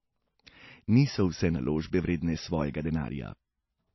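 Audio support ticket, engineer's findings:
Speech dull throughout, nothing above 5.8 kHz. Likely low-bitrate audio saved at a high bitrate: it fits a very low-bitrate MP3 first pass, and re-encoding larger can't restore what that pass removed.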